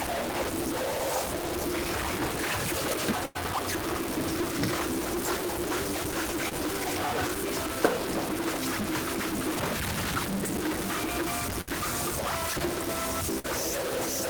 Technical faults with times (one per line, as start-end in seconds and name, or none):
0.00-14.30 stuck bit
2.82-2.94 chunks out of order
3.25-3.37 burst of packet loss
3.84-3.96 chunks out of order
6.49-6.53 short concealed packet loss
6.84-6.96 chunks out of order
11.61-11.69 burst of packet loss
13.39-13.48 burst of packet loss